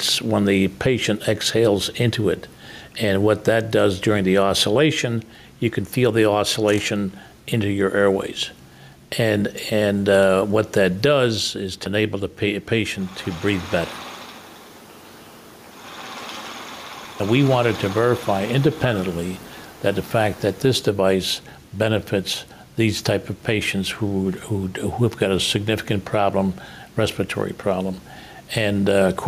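Gain pumping runs throughout: the level ducks by around 5 dB on each loud sound, likely a fast limiter fighting excessive gain, leaving a flattened waveform envelope.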